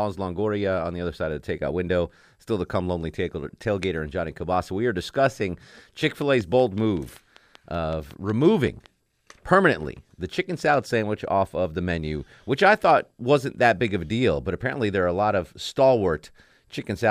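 Between 6.04 and 8.87 s, after "are discussing" and before "permanently the chicken salad", a train of clicks ticks at a regular 5.32 per second: around fifteen similar pulses about as loud as the speech. Likely cause: interference from nearby equipment, or a faulty connection or power supply.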